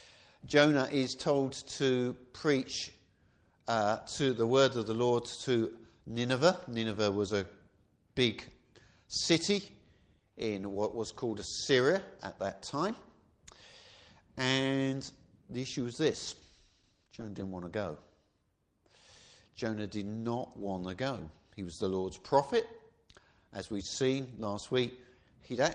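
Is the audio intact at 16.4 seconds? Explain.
No. At 16.4 seconds the audio is inside a call bitrate drop that runs from 16.29 to 17.49 s. The call's bandwidth estimate fell, so the encoder was told to spend far fewer bits. The sound points to a fall from around 32 kbps to about 13 kbps, held at the bottom for roughly 1.1 s. At that rate Opus codes coarsely and trims the high frequencies. The sound turns rough, watery or muffled. It clears again by 17.49 s.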